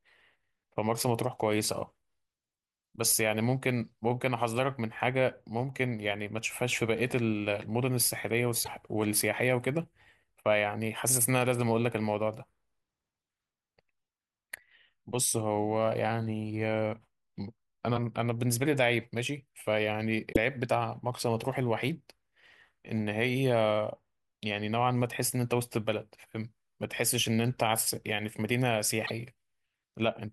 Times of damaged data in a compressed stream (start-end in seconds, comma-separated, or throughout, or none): 8.61-8.68, 20.32-20.37, 29.03-29.11